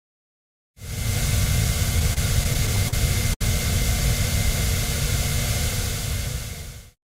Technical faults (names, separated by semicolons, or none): repeated stalls (stutter); short stall from a late packet